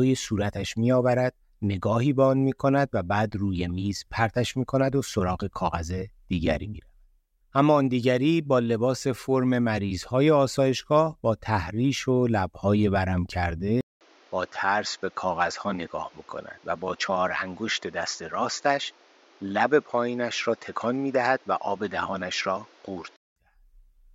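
From 13.81 to 23.36 s, after a 200 ms gap, sound loses everything above 7.3 kHz and gains faint new hiss, likely an input switched to a poorer device.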